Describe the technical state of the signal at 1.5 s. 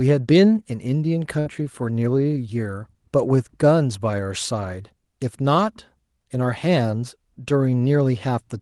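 Right around there you're just coming out of a burst of packet loss, 1.39 to 1.48 s: the receiver stretches the last sound for about 60 ms as it fades, then jumps ahead, skipping roughly 60 ms.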